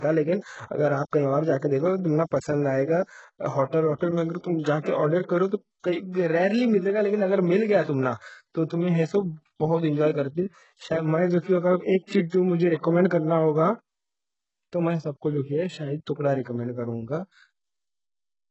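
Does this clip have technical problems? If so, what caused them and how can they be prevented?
Yes. Throughout the speech, heavy HE-AAC compression is the likely cause, at a bitrate that fits an 8 kbps stream. Only the lower band is coded and the treble is rebuilt by spectral band replication, so s sounds turn gritty and lispy, with nothing above 8 kHz. Encoding at a much higher bitrate would prevent this.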